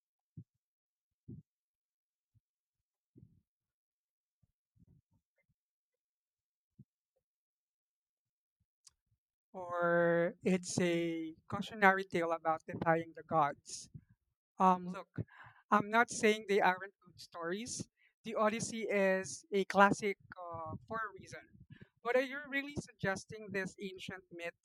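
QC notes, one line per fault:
No faults detected on this speech recording; nothing to flag.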